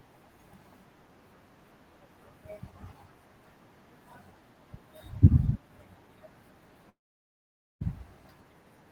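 From 6.89 to 7.82 s the speech trails into a fading buzz, then silence, and returns with about 0.92 s lost, likely from a long network dropout.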